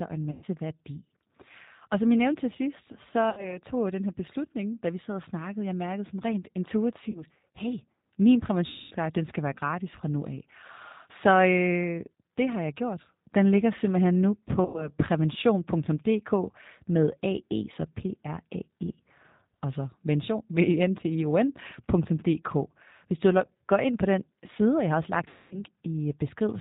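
Throughout, the speech carries plainly audible G.729 codec damage at 8 kbit/s. Nothing above 4 kHz survives, and each short frame is rebuilt from a vocal tract filter, a pitch predictor and a few pulses. That gives a rough, synthetic grain that a simple band-limit, which stays smooth, would not produce.

VoIP packet loss concealed by the speech codec interrupts at 0.31–0.45, 3.30–3.59, 7.10–7.24, 8.68–8.93, 14.65–14.91 and 25.28–25.63 s. A plain dropout would go silent or click. Here the decoder instead stretches the last sound into a fading buzzy tone or coloured noise, and the voice stays weak briefly afterwards.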